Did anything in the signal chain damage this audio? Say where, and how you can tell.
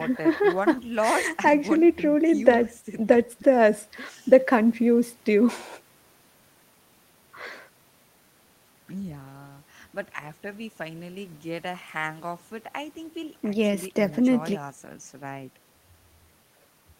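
No, nothing in the signal chain damaged this recording.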